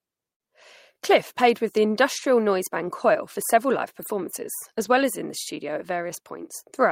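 At 0.33 s a burst of packet loss cuts into the speech. About 60 ms never arrived, so the receiver held the last sound and faded it until the audio resumes at 0.41 s. A spectrogram shows frozen, dimming bands. The waveform repeats and shrinks.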